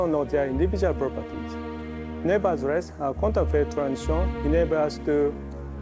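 The audio arrives over a G.722 call path at about 64 kbps, with nothing above 8 kHz. It carries clock drift between sender and receiver: the sender's clock runs roughly 4 percent fast, so the receiver's jitter buffer keeps filling faster than it is played out. Unlike a resampling error, which would raise pitch and tempo evenly, this drift leaves pitch where it is and instead forces a steady stream of small edits to keep latency bounded. Those edits are heard as repeated timing corrections from 0.10 s to 5.78 s, where the receiver trims short pieces so that playback runs at about 104 percent of the sender's pace. Every correction is a cut, never a repeat, because the buffer only ever overfills. They land at uneven intervals, each one small. That spread of similar micro-cuts sets them apart from packet loss, which leaves isolated gaps or concealment smears at scattered moments, and from a single buffer underrun, which is one audible stall.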